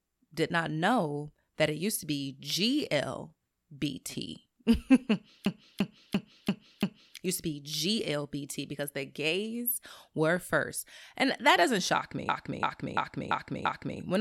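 At 5.46–7.17 s, just before "used to be", and again at 12.29–14.0 s, after "that doesn't shock me", a system hang loop repeats one 341 ms segment five times, a 2.9 Hz machine-gun stutter consistent with hardware cycling a stalled 16384-sample buffer.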